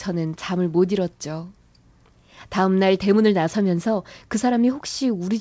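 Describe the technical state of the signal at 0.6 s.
At 0.6 s the speech is intact, with no fault present, only the steady band limit of the call path, which leaves nothing above 8 kHz in a way that fits a G.722 codec.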